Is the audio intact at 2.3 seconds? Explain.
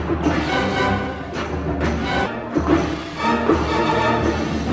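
No. At 2.26 s there is a skip ahead. About a second of audio was dropped while later audio was already waiting. Playback jumps straight forward with no filler. The two sides of the cut are joined almost directly, so the sound lurches abruptly.

Right after, from 2.36 to 3.2 s, a jitter buffer speed-up follows. The buffer was holding more audio than it aims for. It trimmed short pitch-period pieces again and again, about a tenth of a second in total. The sound runs at 110% speed with unchanged pitch and feels hurried.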